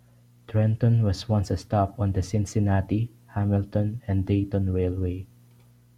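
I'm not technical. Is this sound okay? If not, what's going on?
Yes, this speech recording has no technical faults you can hear. There's nothing wrong with it that needs explaining or fixing.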